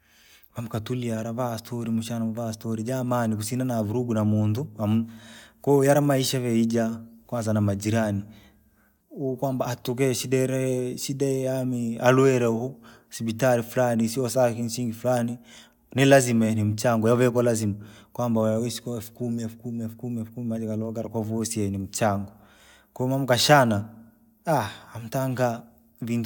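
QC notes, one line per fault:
No faults heard anywhere in the speech.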